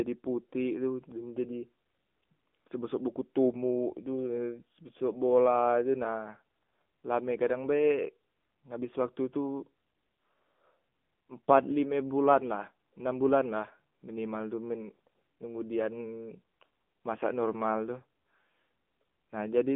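Throughout, the speech shows AMR narrowband mobile codec damage. Nothing passes above 3.6 kHz. The buzzy, synthetic tone fits a low bitrate near 8 kbps.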